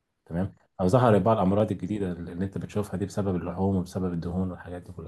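A speech clip with a regular click recurring about every 1.27 s, roughly four times between 0.33 s and 4.14 s. These are clock drift buffer slips, likely caused by two devices running on separate clocks that disagree by something around 300 ppm. The buffer between them gradually over- or underfills until a short block of samples, on the order of 15, is dropped or repeated, producing each tick.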